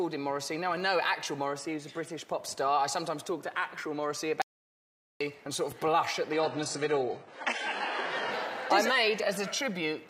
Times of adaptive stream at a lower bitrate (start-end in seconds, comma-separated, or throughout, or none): 6.33-8.33